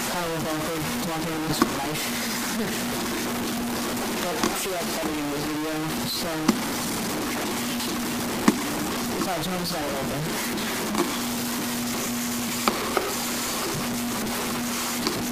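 Low bit depth without dither runs throughout: quiet sounds are coarse and grainy, with distortion that tracks the signal and sits about 5 dB louder than it. It likely comes from truncation to about 4 bits. Compressed frames skipped at 1.49 to 1.52 s: the audio jumps ahead by a few frames, consistent with 20 ms frames, losing about 70 ms.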